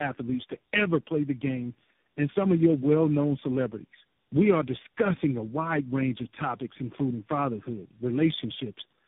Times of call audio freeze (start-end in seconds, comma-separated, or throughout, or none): none